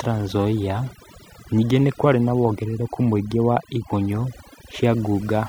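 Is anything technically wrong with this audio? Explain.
Yes. Throughout the speech, the background drops and breaks up into twinkling specks, and the voice has its softer detail missing. This is overdone noise removal: a noise reduction stage was set far too aggressively, so any frequency band sitting close to its noise estimate gets pulled right down or switched off. Quiet parts of the voice fall below that threshold and vanish along with the noise.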